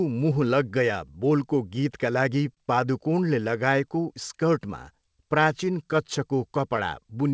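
It's a short speech clip, and the big thing going on is clock drift between sender and receiver. The sender's clock seems to run roughly 3 percent slow, so the receiver's jitter buffer keeps draining instead of holding steady. The whole clip has a faintly uneven feel, as if the timing can't quite settle, and that unease lasts from start to finish.

You can hear how the receiver copes through repeated timing corrections running from about 0.04 s to 7.33 s. It keeps stretching out little bits of the sound to make up for the slow sender, which plays the audio at about 98 percent speed and adds something like 150 ms over the run. The edits all go the same way but aren't evenly spaced, so it comes across as a slightly wobbly tempo with the odd small hiccup rather than clear repeats.

There's also a short stall from a late packet between about 2.55 s and 2.59 s. A packet didn't turn up in time, the buffer ran dry, and the receiver held the last sound for about 21 ms until it arrived. 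Nothing is lost, since it picks up exactly where it left off, but that moment sounds briefly held, with a slight buzz or dip. All of this sits on a call-codec path where nothing comes through above 8 kHz, which fits G.722 at 64 kbps.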